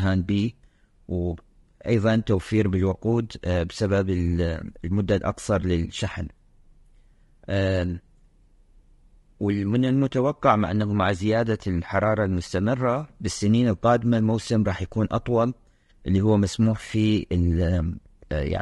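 Throughout, the speech sounds rough and grainy, with noise between harmonics and a synthetic top band, likely low-delay AAC compression at roughly 32 kbps.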